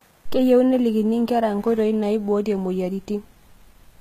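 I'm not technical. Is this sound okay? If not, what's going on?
No. The speech sounds gritty and lispy on s sounds throughout, likely from HE-AAC compression, which rebuilds the treble by copying lower sounds upward rather than keeping the original.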